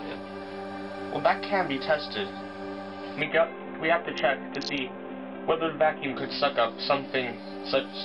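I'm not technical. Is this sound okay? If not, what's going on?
No. From about 3.2 to 6.2 seconds there's a Bluetooth SBC bit pool drop. The wireless link got crowded, so the sending device cut back hard on how much detail it packed into each slice of sound to keep it playing without gaps. The highest sounds get dropped first and everything else gets rougher, so that stretch turns dull and muffled with a gritty, sandy edge. Once the link recovers, the clear sound comes back.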